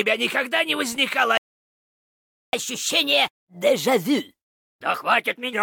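At 1.38 s the sound cuts out completely in mid-flow. Silence holds for about 1.16 s, until 2.53 s. This is a playback stall. The player likely ran out of buffered data, or its output thread was briefly blocked.

From 2.53 s the audio resumes in a catch-up at higher speed. It runs at 1.15 times normal rate until 5.53 s. The pitch rises by about two semitones. The player is resampling its backlog to recover lost time, then settles back.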